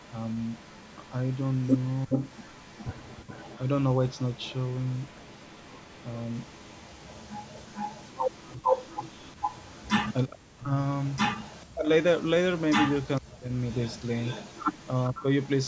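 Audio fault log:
0.00–10.14 s, 10.95–11.65 s and 12.20–15.67 s, echo leak: the far end's echo canceller likely let its loudspeaker pickup through, so a delayed copy of the speech trails the original by 410 ms at first, then 457 ms, roughly 20 dB down (nearer 25 dB in the middle stretch).
2.06–2.11 s, 10.28–10.72 s, 11.63–11.89 s, 13.19–13.52 s and 15.10–15.26 s, speech suppressed in double talk: with both sides talking, the canceller likely mistook the talker for echo and clamped down. The speech briefly dips or drops out, less deeply at 2.06 and 15.10 s but almost to silence in the middle three.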